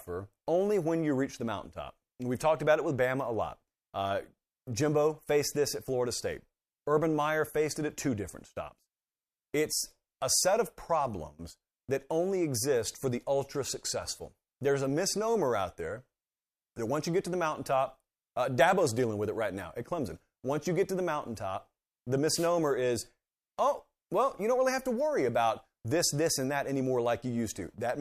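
At 22.28 s the radio link of an analogue FM wireless microphone briefly faded, as reflected copies of the signal cancelled at the receiver, producing a wireless microphone noise hit. With the carrier weakened, receiver noise rose and broke through into the speech for about 0.22 s, until 22.50 s. It sounds like a short swish of static laid over the talker, falling between "to the mountaintop the" and "is oh well you".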